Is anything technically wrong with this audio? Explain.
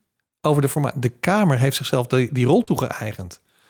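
Yes, there is short concealed packet loss at 0.73 to 0.77 s and 2.63 to 2.69 s. About 20 ms, then 40 ms, of speech arrived too late, so the receiver extended the preceding sound, leaving brief smears.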